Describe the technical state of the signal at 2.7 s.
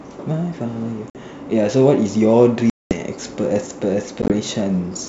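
At 2.70 s the signal drops into packet loss on an ADPCM call, a hard-edged hole running to 2.96 s with about 210 ms of audio missing, which fits roughly twenty short packets. The G.722 decoder's predictor and step size lose track of the sender, so the speech resumes with brief, slight distortion.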